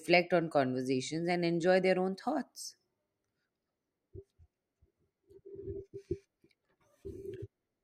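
No technical faults are audible anywhere in this speech recording.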